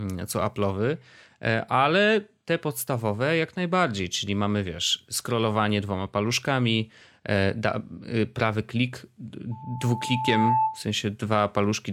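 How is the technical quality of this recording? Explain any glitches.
The recording has one clear glitch, a loudspeaker feedback squeal from 9.51 to 10.85 s, just after "prawy klik". A steady tone near 878 Hz swells over about a second until it sits roughly 5 dB above the speech, then stops. The microphone was picking up a loudspeaker carrying its own signal, and around 878 Hz the loop gain exceeded one, so that single frequency fed on itself and kept growing into a howl.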